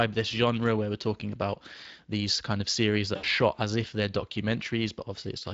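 From the start and through the whole clip, the Speex codec leaves plainly audible damage on the speech. The coding sounds like a setting of about 20 kbps, where the CELP excitation has too few bits to reproduce the voice's fine structure. Voiced sounds take on a rough, hoarse, noisy texture, and the detail that would give the voice clarity is replaced by a coarse approximation.

At 3.15 s, right after "these kind of series", there is VoIP packet loss concealed by the speech codec. The gap spans about 80 ms and fits four lost 20 ms frames. The decoder fills it by extending its last pitch and spectral envelope at falling gain. The result is a brief stretched sound that fades. The packets return at about 3.26 s, and the speech stays weak and distorted for a short while after that as it runs into "shot as if they're".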